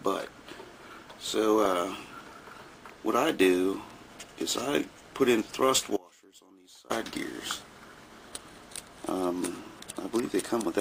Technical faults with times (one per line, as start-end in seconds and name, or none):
5.97-6.90 audio dropout to a faint residue